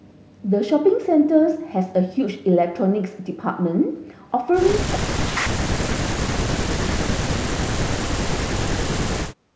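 From 4.85 to 7.1 s and again from 7.39 to 9.51 s, the speech is heavily suppressed in double talk, dropping by roughly 40 dB in places. The cause is likely an echo canceller that, with both ends talking, could not tell this talker from loudspeaker echo and attenuated everything. The call path's G.722 coding at 64 kbps caps the audio at 8 kHz.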